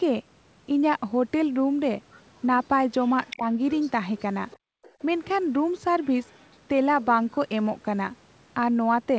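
A faint second voice, most likely the other side's voice leaking through from a loudspeaker the echo canceller didn't fully cancel, appears at 2.11, 3.02 to 3.37, 3.71, 4.51, 4.83 and 6.23 to 6.56 s. It sits roughly 15 to 35 dB under the talker, loudest around 3.02 s. Unlike the dips below, it adds sound rather than removing it.

From 3.37 to 3.45 s the talker's own voice dips by roughly 10 dB for about 70 ms. This is likely speech suppressed in double talk, as the canceller turns down both voices while the two overlap. The talker's voice dips rather than the room sound vanishing.

Between 4.57 and 5.0 s the background is gated by the echo canceller, dropping about 39 dB for roughly 400 ms while the loudspeaker plays. The room tone goes silent, then returns once the canceller releases.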